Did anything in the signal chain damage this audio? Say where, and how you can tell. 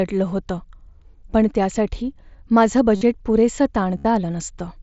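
Yes. The damage is concealed Bluetooth headset packet loss, in the wireless link between headset and phone. There are two bursts. The first runs from 2.96 to 3.01 s, right after "पण त्यासाठी माझं". The second runs from 3.98 to 4.05 s. Each sounds like a short buzzy tone at steady level, with a slight warble as real speech resumes. The gaps are about 52 and 68 ms. That suggests runs of lost mSBC frames. The receiver filled each gap by repeating the closest-matching recent stretch of waveform.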